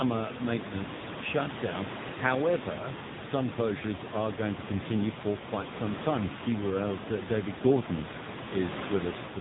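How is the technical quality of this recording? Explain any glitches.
Quality's pretty rough: heavy AMR narrowband mobile codec damage throughout. Everything above 4 kHz is gone, and the speech comes out buzzy and synthetic, which fits a low AMR-NB mode around 6.7 kbps. The room noise, sitting about 9 dB under the speech, gets squeezed through that same coarse model.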